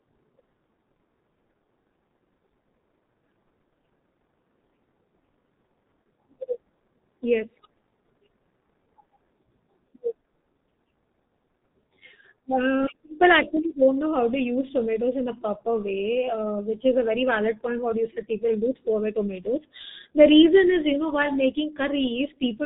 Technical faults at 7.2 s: G.723.1 codec

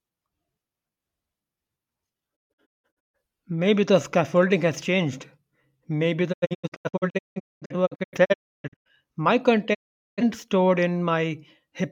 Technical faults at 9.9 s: digital broadcast dropout

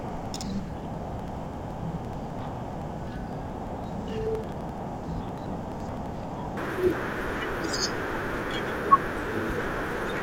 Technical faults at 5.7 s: interleaved audio read as planar

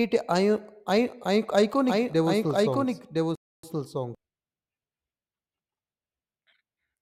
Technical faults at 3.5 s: doubled audio track; rebuffering stall

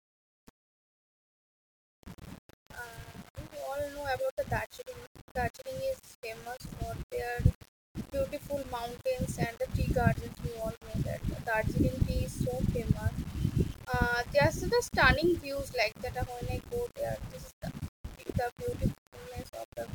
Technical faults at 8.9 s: low bit depth without dither

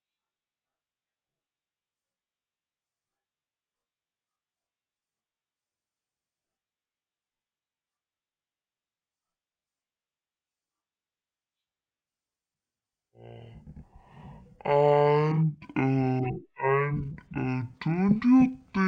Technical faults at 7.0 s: stereo read as mono

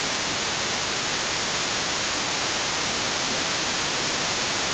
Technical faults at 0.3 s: other side's voice leaking through; speech suppressed in double talk

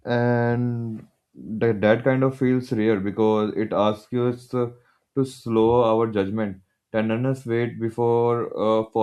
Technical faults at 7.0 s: none

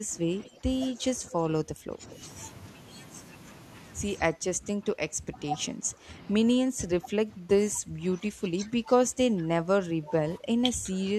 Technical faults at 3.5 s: none

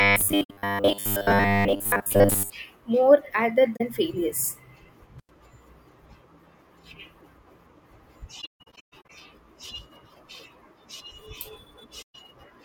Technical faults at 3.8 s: AAC frame loss with muting

